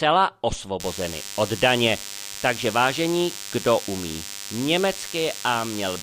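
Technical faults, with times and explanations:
0.80–6.02 s, DECT cordless phone buzz: nearby radio bursts every 10 ms get rectified, adding a thin 100 Hz buzz roughly 15 dB down, seen as evenly spaced harmonic lines on a spectrogram.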